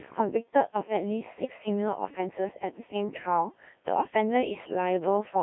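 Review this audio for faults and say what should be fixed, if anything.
The whole speech clip runs through a Codec 2 vocoder. It's robotic and buzzy throughout, heavily damaged, and squeezed into roughly 200 Hz to 3.6 kHz. That fits about 1.3 kbit/s, where only pitch, voicing, energy and envelope survive and sine waves rebuild everything. Keep a wideband, higher-bitrate path for anything needing natural speech.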